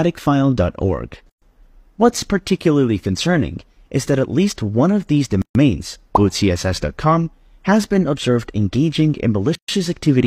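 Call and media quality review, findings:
Gap at a join of encoded pieces: silences of 0.12 s at 1.30 s, 0.13 s at 5.42 s and 9.55 s, repeating every 4.0 s. Waveform drops flat and the spectrogram shows blank vertical bands with slightly smeared edges. Separately encoded segments were concatenated without trimming encoder delay and padding.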